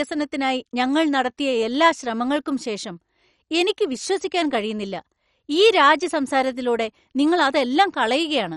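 Throughout the speech, a dull, gurgling granularity suggests likely MP2 compression at a low rate near 48 kbps; the spectrogram shows nothing above 11.3 kHz and flickering upper bands.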